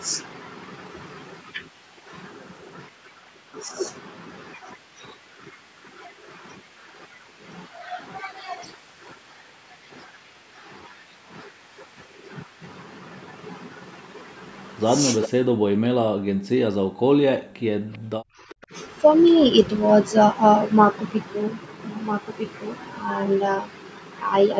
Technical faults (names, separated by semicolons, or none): echo leak; background gated by the echo canceller